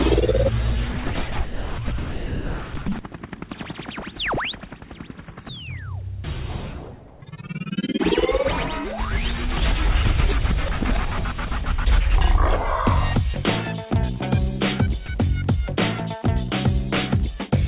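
From 0.92 to 2.86 s the sound is chopped by the voice detector. Over these two seconds the sending side appears to have switched transmission on and off several times, likely because its voice detector misjudged the quieter material. About 1.3 s in total is replaced by synthetic fill, so the sound stutters and the background keeps flipping between real and artificial texture. Repeated switching within one stretch is what sets this apart from a single dropout.

Three brief cases of sound dropped by the voice detector follow, at 4.80–4.82 s, 11.64–11.66 s and 13.34–13.36 s. Each lasts 20 ms. In each, a sliver of real sound, 10 ms at the first and 20 ms at the other two, vanishes under comfort noise, likely because the detector took it for background and stopped sending until transmission resumed. These are single clean gaps with no flicker. They come across as tiny nicks in the sound.

At 7.08–7.22 s there is comfort noise in place of the background. 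For 140 ms the real ambience, which sits about 28 dB below the loud parts, is swapped for a smooth, featureless hiss only about 1 dB quieter. This is likely discontinuous transmission during a genuine pause. No wanted sound is cut, which distinguishes it from the dropouts. What changes is the grain of the background, which loses its detail. Throughout the clip nothing is present above 4 kHz, as expected from a narrowband call codec.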